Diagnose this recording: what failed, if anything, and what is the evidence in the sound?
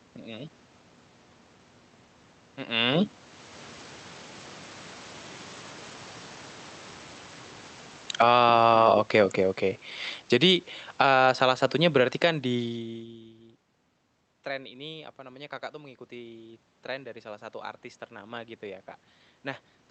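Automatic gain falling, in the call processing stage. At 7.91 to 8.41 s the speech and room noise sink together by about 15 dB, then again from 9.26 to 11.17 s by about 11 dB, just before "salah satunya berarti kan". The AGC judged the input too loud or too noisy and pulled its gain down.

Automatic gain rising, also in call processing. From 8.36 to 9.34 s the level swells back about 6 dB. From 14.48 to 18.93 s it climbs another 6 dB after the talker moved away around 12.5 s and the input dropped about 23 dB, so only part of the lost level comes back.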